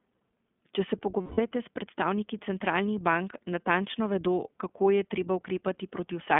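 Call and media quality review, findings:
iLBC codec, throughout: speech slightly rough and synthetic, band limited to roughly 200 Hz–3.5 kHz, codec damage plainly audible. Narrowband VoIP coding in 20 ms frames, each excitation coded independently. Sound fits iLBC's 15.2 kbps mode.

Lost iLBC frames, 1.22–1.40 s: 160 ms of held, buzzy, breathy vowel-like tone replacing speech. Packet loss, consistent with eight 20 ms frames. Decoder concealment repeats the last pitch cycle mixed with noise. Clean recovery immediately after, since frames stand alone.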